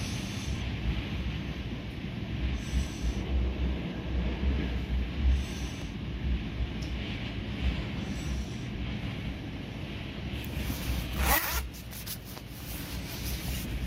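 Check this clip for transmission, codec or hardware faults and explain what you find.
There is one fault, repeated three times. At 2.87, 5.82 and 11.72 s the sound skips forward by about a twentieth of a second. The likely cause is audio missing between chunks: a roughly 3 s recording cycle drops a sliver at each handover and splices the two ends together. Unlike a dropout, no silence is left behind, only an abrupt jump.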